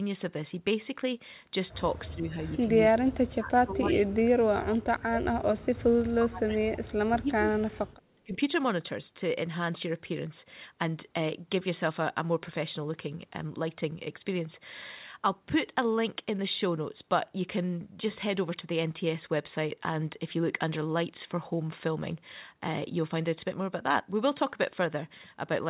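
From 2.09 to 2.67 s the speech dips by roughly 15 dB. It recovers briefly, then from 2.85 to 8.38 s it sinks again, by as much as about 35 dB, affecting roughly five seconds. This is likely speech suppressed in double talk. The echo canceller could not tell this talker from the far end's echo, so it turned both down. The call path carries nothing above 4 kHz.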